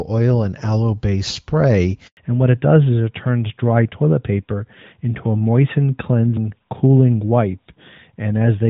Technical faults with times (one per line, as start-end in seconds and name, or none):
2.07-2.17 handover gap
2.17-8.70 fallback to narrowband